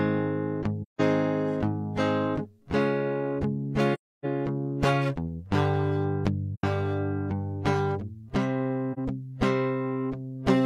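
The music drops out at 0.82 to 1.01 s, 3.94 to 4.25 s, 6.54 to 6.64 s and 8.93 to 8.99 s. This is AAC frame loss with muting. Lost frames are decoded as silence. Overlapping windows fade each hole in and out softly.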